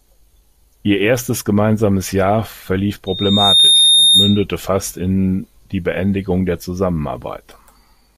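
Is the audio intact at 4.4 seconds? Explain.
No, a steady 3.7 kHz squeal rises over the speech, swelling over roughly 0.7 s from 3.06 to 4.45 s to sit around 5 dB above it. This is loudspeaker feedback squeal, where a microphone re-amplifies its own loudspeaker output until that tone runs away.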